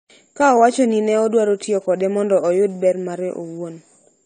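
Throughout, nothing sounds above 9 kHz and sibilants warble and smear. That is likely AAC compression at a low bitrate near 32 kbps, not plain low-pass filtering, which would dull without the swirl.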